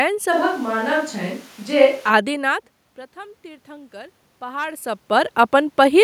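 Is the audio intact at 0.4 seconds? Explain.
No. From 0.33 to 2.09 s the sound turns abruptly roomy and hollow, with thinner bass at a similar level. This likely comes from a switch to a distant microphone. A spectrogram shows weakened low frequencies, smeared reverberant tails and a raised noise floor, still well below the speech.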